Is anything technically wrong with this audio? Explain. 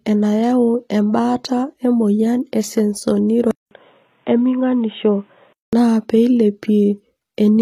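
Yes. Throughout, the speech has a gritty, metallic treble with nothing above 14.9 kHz. This is likely HE-AAC compression, rebuilding the highs from copied lower bands at a bitrate near 24 kbps.

From 3.51 to 5.73 s, a 200 ms silence precedes duller, boxier sound. Nothing passes above 3.8 kHz, the level drops about 5 dB, and faint new noise appears. An input switched to a poorer device is the likely cause.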